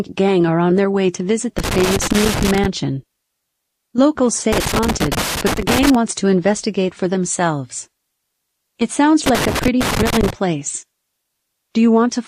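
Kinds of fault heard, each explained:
Loose connector crackle: a worn or dirty contact somewhere in the cable run keeps making and breaking as it shifts, so the speech gets chopped into an irregular burst of scratchy crackle. You get three separate bouts of it, from about 1.59 to 2.66 s, 4.53 to 5.95 s, and 9.26 to 10.30 s, each lasting roughly a second or a bit more, with clean stretches between them.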